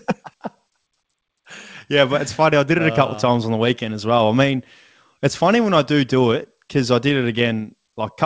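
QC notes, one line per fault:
Nothing stood out on listening to this speech recording, which comes through a call path whose content stops at about 8 kHz.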